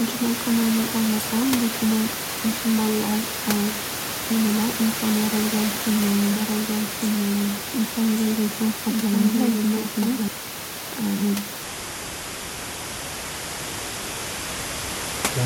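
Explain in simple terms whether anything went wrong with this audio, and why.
Something does go wrong near the end. From 11.63 s until the clip finishes at 15.45 s, there is a section at the wrong speed. The speech suddenly plays at about half speed (0.52 times), so it drags and drops nearly ten semitones, sounding deep and sluggish. This is likely a player or editor running that part on the wrong clock. What sets it apart from a plain pitch change is that timing and pitch slow down together. The room noise beneath the speech is just part of the recording.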